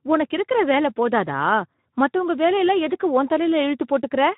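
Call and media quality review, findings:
Speex codec damage, whole clip. Speech hoarse, grainy and noisy. Nothing above 3.8 kHz. Probable component: Speex encoder at a low-to-mid quality setting, fitting around 11 kbps. Mechanism: too few bits for the CELP excitation, so the residual comes out as noise. Distinct from a plain narrowband low-pass: that stays clean, while this hoarseness is in the voice itself.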